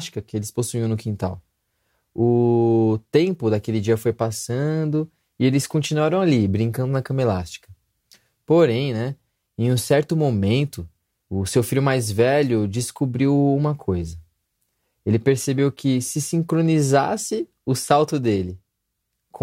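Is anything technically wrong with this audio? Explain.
No, nothing technically wrong stood out on listening to this recording.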